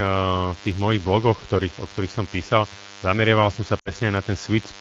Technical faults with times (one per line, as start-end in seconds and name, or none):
0.00-4.80 DECT cordless phone buzz
3.79-3.92 lost AMR speech frames